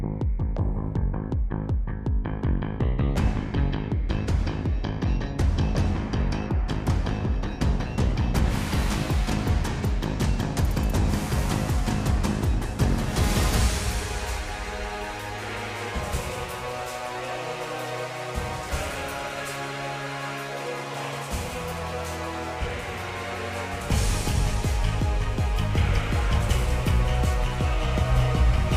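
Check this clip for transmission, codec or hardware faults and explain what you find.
Nothing stood out on listening to this clip.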